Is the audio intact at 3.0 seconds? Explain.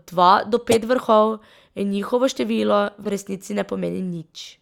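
No. Just after 3.03 s a corrupt frame was decoded: bit errors in a few compressed frames were played anyway, putting energy at wrong frequencies until 3.07 s. It comes out as a brief chirp, squeak, blip or burst of noise, peaking around -25 dBFS, right before "v resnici".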